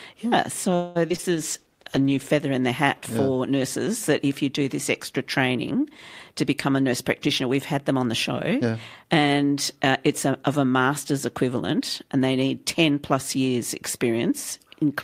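A speech clip, and it's rough early on. From 0.75 to 1.25 s there's repeated packet loss, giving that choppy, robotic sound: four gaps, the longest about 200 ms, with roughly half the stretch patched over by stretching the last sound. Right after, from 1.32 to 2.39 s, there's a call bitrate drop from 48 to 14 kbps, bottoming out for about a second, so the speech goes coarse and muffled just before "in the hat for". Later the jitter buffer speeds up twice, trimming pitch periods to shed a backlog. After "do this extra training", 6.43 to 8.06 s runs about 5% fast, and 8.53 to 9.77 s runs about 7% fast before "uh it's a of". Each pass drops around a tenth of a second, so it sounds hurried at normal pitch.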